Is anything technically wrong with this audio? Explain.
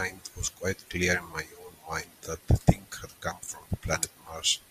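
Yes. DAB burbling occurs from 1.99 to 2.98 s and from 3.73 to 4.49 s. Uncorrected reception bit errors corrupt frames: wrong samples put short blips of noise into single sub-bands over the speech, and wrong scale factors make sub-bands jump in level.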